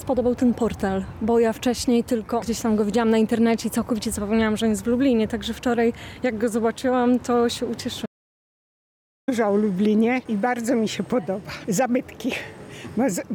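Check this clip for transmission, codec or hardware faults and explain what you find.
One fault stands out: an audio dropout to silence from 8.06 to 9.28 s. The sound cuts off abruptly mid-flow and returns about 1.2 s later, likely because the input was lost while zeros kept being written. Unlike a natural pause, the gap is silent with no room tone.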